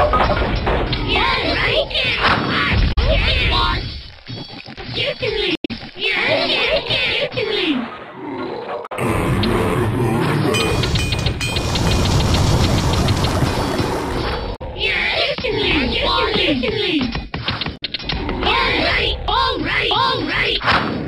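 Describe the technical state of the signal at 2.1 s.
At 2.1 s the audio is intact, with no dropout, distortion or other fault to be heard.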